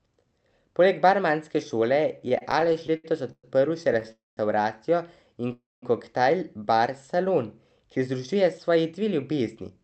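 From 2.19 to 4.06 s the speech stutters through repeated stalls: the jitter buffer kept running dry as packets arrived late, and the receiver stretched the last sound across 17 small gaps, the longest 117 ms, adding 344 ms, about 18% of that stretch. Nothing is lost, but delivery drags and catches. A spectrogram shows short smeared, repeated slices where the harmonics go flat. On the waveform, periodic copied cycles break up the envelope.

At 4.12 to 4.39 s comes a call audio freeze, likely caused by packets held up in transit emptying the buffer. The last sound continues as a fading buzz for about 60 ms, then 190 ms of silence, and the speech resumes where it stopped, pushed 251 ms later. The same happens at 5.53 to 5.84 s, a 297 ms hold with 210 ms of silence. The waveform shows a decaying tail followed by flat silence. The spectrogram shows a blurred band that fades into an empty column.

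From 8.34 to 9.77 s a jitter buffer speed-up drains the surplus delay by cutting short pitch-period pieces, about a fifth of a second in total. The speech runs at 112% speed with unchanged pitch and sounds hurried. Syllables sit closer together on the waveform, while harmonic spacing in the spectrogram stays constant. The Opus call path's 8 kHz upper cutoff is visible throughout as an empty band above that line.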